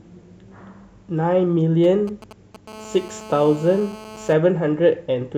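From 1.84 to 2.56 s, GSM signalling bursts break into the speech: a galloping dit-dit-dit of ticks and brief buzzes. The pattern points to a nearby 2G handset exchanging short bursts of control traffic with the network rather than carrying a call. The audio circuitry rectifies those radio pulses, so each group comes through as a clipped fragment of a 217 Hz buzz, sitting roughly 20 dB below the speech.

From 2.68 to 4.33 s, the interference settles into a continuous GSM phone buzz. It is a hard, raspy tone at 217 Hz, rich in harmonics and unrelated to the speech, at about 19 dB below it. The steadiness fits a handset now in an active call, transmitting its time-slot bursts 217 times a second without pause. The rectified pulse train becomes a constant buzz that runs under the speech for the whole stretch.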